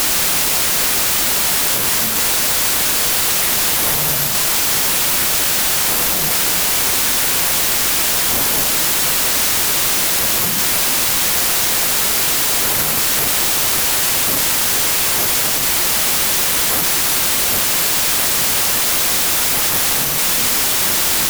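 Throughout, a wrong sample width: 32-bit data read as packed 24-bit, so speech plays at 0.75 speed, lowered, under loud noise, unlike byte-order errors, which keep speed.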